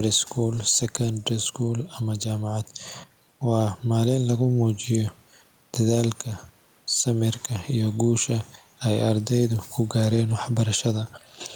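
Speech with gain pumping throughout: the room background sits about 41 dB below the voice, and the gain swings by around 5 dB. The likely cause is input gain set far too high with a fast limiter clamping down on each peak. On a waveform the envelope looks flattened, peaks pressed to a near-constant ceiling.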